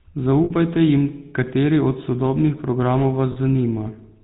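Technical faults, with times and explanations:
Throughout, GSM full-rate codec. The speech has a buzzy, gravelly roughness, and the damage is plainly audible. The codec models the vocal tract and excites it with regularly spaced pulses, keeping only every third excitation sample. This coarse excitation causes the grain. Nothing above 4 kHz survives, so the sound is narrow and dull at the top. The character points to the 13 kbps full-rate mode.
0.44 to 0.51 s and 3.32 to 3.37 s, lost GSM frames. The first gap lasts 60 ms and ends just before "jim kateri od sodobnih". The second lasts 40 ms. In each, the sound is held as a short, rough, metallic ring. The decoder repeats the last good frame's settings in place of the bad ones. Both losses are far shorter than the fade to silence, so the ring bridges them.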